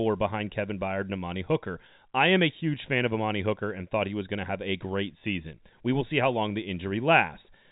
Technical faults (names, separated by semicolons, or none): none